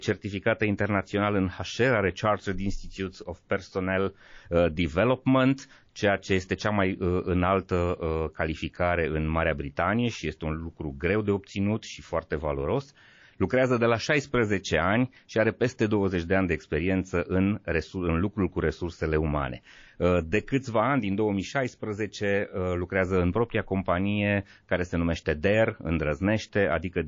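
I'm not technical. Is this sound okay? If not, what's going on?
No. The speech was likely squeezed hard by MP3 compression, which throws away detail it judges unimportant. Throughout the clip, the sound has a watery, swirling quality, with metallic chirps on s sounds.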